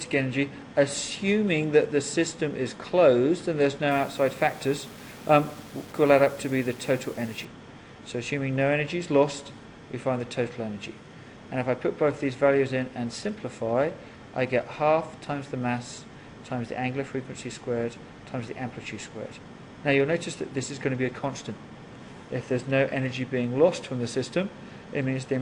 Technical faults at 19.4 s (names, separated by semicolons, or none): none